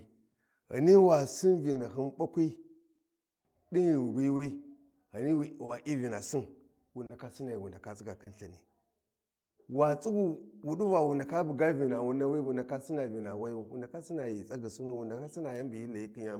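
Right from the start there's clock drift between sender and receiver. The sender's clock runs roughly 2 percent slow against the receiver's, so the receiving side keeps running short of audio and has to pad it out. You get small timing wobbles here and there across the whole clip rather than at any single spot, and the speech pacing never quite settles into a steady rhythm.

From 0.31 to 8.29 s there are scattered short gaps. Around seven packets went missing or showed up late, spread through that stretch. Each hole got patched by carrying the previous sound forward, and the longest patch is only about 30 ms. Altogether it's a couple hundred milliseconds, a few percent of the span. Nothing actually drops out, but you catch little ticks and smeared bits now and then.

From 9.09 to 16.11 s come repeated timing corrections. Because the slow sender can't keep the buffer fed, the receiver keeps stretching the speech by repeating short slices, all in the same direction, playing at an effective 98 percent speed. 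That adds something like 150 ms over the stretch. The edits are small and unevenly spaced, so it comes across as a slightly dragging, uneven tempo with the odd hiccup.

Inside that, at 14.86 to 14.92 s, there's a short stall from a late packet. The buffer ran dry when a packet wasn't there in time, so the last sound got held for 30 ms until it arrived, and playback picked up from the same point, now running 30 ms later. Nothing's lost, but you hear a sound hang a touch too long with a faint buzzy dip.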